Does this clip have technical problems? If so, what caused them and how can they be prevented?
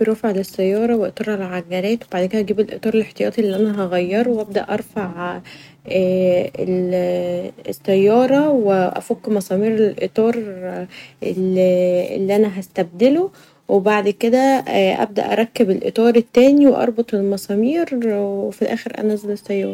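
Yes. The speech has hard clipping in two places. A brief crackle appears from 13.03 to 13.06 s, just after "اللي أنا", and a longer stretch of clipping runs from 16.07 to 16.70 s. The level there ran about 2 dB and about 3 dB past what the recording stage could pass, so the waveform peaks were sheared flat, adding high harmonics. Leaving more headroom by lowering input gain, or using a limiter before the converter, prevents this.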